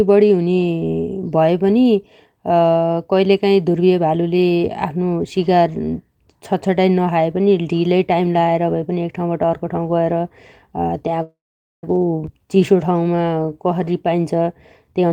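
At 11.22 s the speech freezes for about 0.6 s, until 11.84 s. The last sound trails off and then goes silent for roughly 470 ms. That's a call audio freeze, likely packets stalling so the jitter buffer ran dry. When it picks back up, nothing's missing; the speech just arrives late.

Right after, from 12.26 to 12.29 s, there's a skip ahead. About a fifth of a second of speech gets thrown away and the two sides are butted together with only an 18 ms join. So you hear a sudden jump where a chunk simply isn't there.

From 12.38 to 13.91 s there's a jitter buffer slow-down. The receiver keeps repeating single pitch periods to rebuild its cushion, adding about 198 ms in total. The speech plays at 88% speed with the pitch unchanged, so sounds get stretched and a bit draggy.

Then from 14.93 s to the very end there's a jitter buffer speed-up. Short slices of a pitch period or so are cut out over and over, about a tenth of a second in all. 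That pushes the speech to roughly 147% speed at the same pitch, and it sounds clipped and rushed.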